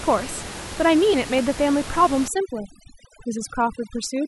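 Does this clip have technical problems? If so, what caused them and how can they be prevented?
Yes. CD scratch ticks: a scratch on the disc defeated its error correction once per revolution. Between 1.17 and 2.05 s the player patched the lost samples, producing five regular ticks, each under a millisecond long. Cleaning or replacing the disc, or ripping it with a secure extractor that re-reads damaged sectors, prevents this.

Overdone noise removal: from 2.28 s to the end, a noise reducer set too strong cut frequency bands that fell near its noise estimate. This left twinkling specks in the background. Using gentler reduction settings and checking the result by ear prevents this, especially since the room noise sits about 13 dB below the speech.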